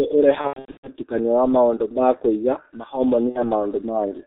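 Throughout the speech, the G.723.1 codec at 6.3 kbit/s leaves nothing above 4 kHz and heavy coding damage: a muffled, hoarse tone with smeared consonants. Its slow, 30 ms-frame voice model blurs transitions, which sets it apart from simple low-pass filtering.

From 0.41 to 0.89 s, VoIP packet loss concealed by the speech codec turns the voice into a stretched sound that fades. The gaps total about 330 ms scattered over 420 ms, with the longest run 120 ms. Unlike a plain dropout, most of the gap is filled with extrapolated sound, though the longest run is muted from its third lost frame.

At 3.29 to 3.41 s, a shorter concealment of about 60 ms, which fits two lost 30 ms frames, briefly smears the voice into a fading sound. Because each decoded frame builds on the last, the sound stays weakened for a short while after packets resume.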